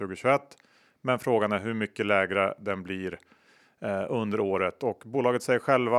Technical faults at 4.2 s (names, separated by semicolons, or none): none